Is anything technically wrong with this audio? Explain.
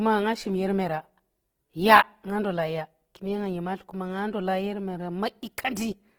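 Yes. Opus compression damage runs through the whole speech clip, from start to finish. The encoder's music mode likely caused it: it preserves each band's energy but, short of bits, fills bands by copying lower ones or injecting noise. The damage is plainly audible as a rough, grainy, noisy texture in the speech rather than swirling holes, which fits a bitrate around 16 kbps. The bandwidth stays wide, reaching about 20.5 kHz.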